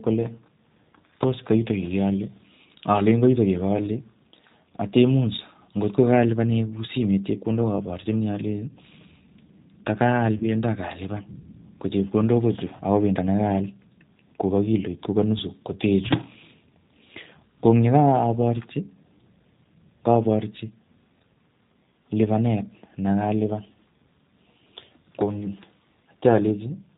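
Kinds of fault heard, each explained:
G.729 codec: The whole recording has the rough, slightly synthetic quality of a low-rate CELP speech codec, consistent with G.729A at 8 kbit/s. The decoder rebuilds each 10 ms frame from a vocal tract filter, a pitch predictor and a few pulses, so the fine detail of the original is lost. The damage is plainly audible as a rough, coarse texture, and nothing above 4 kHz passes, which gives the band-limited telephone sound.
VoIP packet loss concealed by the speech codec: From about 10.38 s to 10.45 s, roughly 30 ms of audio is missing, which fits three lost 10 ms frames. The decoder fills the gap by extending its last pitch and filter settings while lowering the gain frame by frame. The speech briefly turns into a stretched buzzy tone or coloured noise that fades. Because each frame is predicted from the one before, the sound stays weak or distorted for tens of milliseconds or more after the gap.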